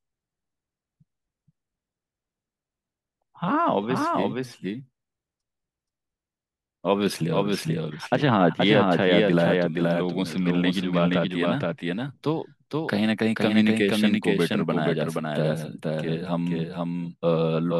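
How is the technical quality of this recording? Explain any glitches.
The recording is marred by a doubled audio track running through the whole clip. A second, slower capture path or an edit holding two misaligned copies likely mixed the speech in twice, so a clean full-band copy trails about half a second behind, roughly 5 dB quieter, with no decay or room colour. Each phrase is immediately restated as a flat, overlapping echo.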